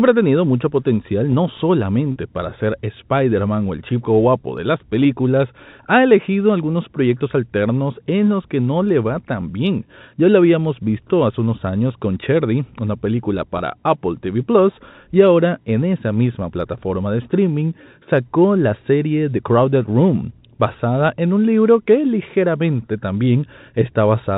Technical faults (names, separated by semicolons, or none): packet loss with pitch repetition